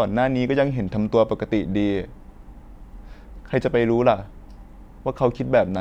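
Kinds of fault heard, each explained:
No faults can be heard in this recording.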